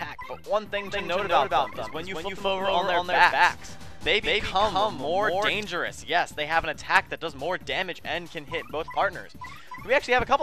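A likely second capture path runs the audio twice from 0.86 to 5.64 s, producing a doubled audio track: an equally loud, dry copy about 200 ms behind, cutting in and out abruptly.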